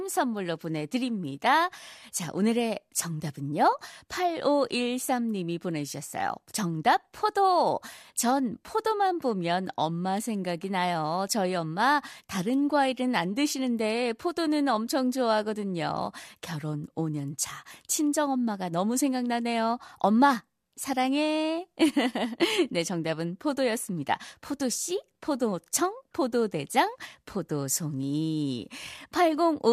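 Nothing in the speech stood out as a technical fault on listening.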